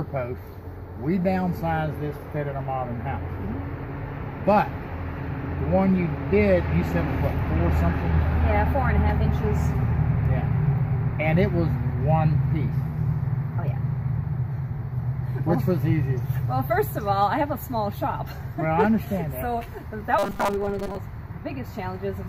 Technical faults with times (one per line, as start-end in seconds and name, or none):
20.19-20.96 robotic sound from repeated short buffers